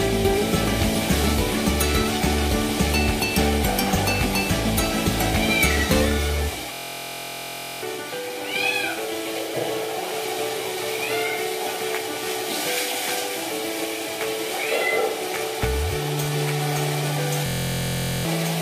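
At 6.73 to 7.83 s and again at 17.46 to 18.25 s, a system hang loop repeats one 23.2 ms buffer, fitting 1024 samples, as a 43 Hz buzz, swallowing roughly a second of audio the first time and about 0.7 s the second.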